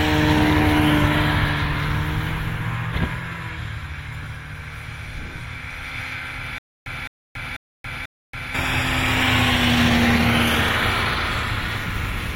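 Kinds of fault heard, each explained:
Stutter with silent gaps: likely a stalled stream replaying its last 0.21 s fragment four times, each followed by 0.28 s of silence, from 6.58 to 8.55 s.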